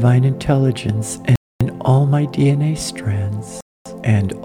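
Gaps between chunks cut the audio at 1.36–1.61 s and 3.61–3.86 s. It plays in 2 s pieces, with 250 ms of silence at each join.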